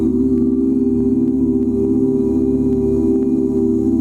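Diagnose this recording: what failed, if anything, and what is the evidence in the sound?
Gain pumping runs through the whole recording. The gain swings by around 5 dB, and the level contrast between loud and soft passages is flattened, giving a squashed texture. The stage is the input and dynamics processing: the input gain was likely set far too high, so a fast limiter or compressor clamps down on every peak and releases in the pauses.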